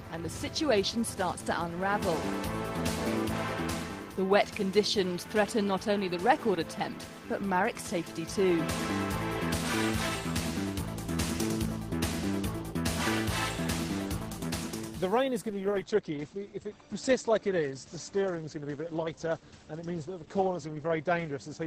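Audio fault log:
15.5 to 21.67 s, call bitrate drop: the encoder falls from 32 to 11 kbps, bottoming out for about 5.3 s, and codes more coarsely, so the sound turns rough and muffled. The spectrogram shows content above 8 kHz vanishing, a flat ceiling replacing the 20 kHz top.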